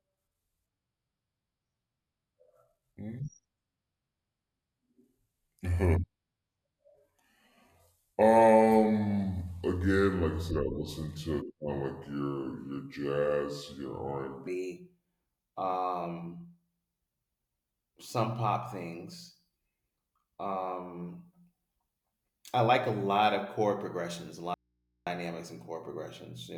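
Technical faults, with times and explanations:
0.00 to 14.47 s, section at the wrong speed: the speech plays at 0.716 times its proper rate, so it sounds slow and deep, about five semitones low. Speed and pitch drop together. The likely cause is playback against the wrong clock.
24.54 to 25.07 s, audio dropout to a faint residue: after "of chord progressions a" the signal cuts out abruptly for 0.53 s. Only mains hum remains, about 50 dB down. It returns at "and chord progressions". The likely cause is a lost input while the chain stayed live.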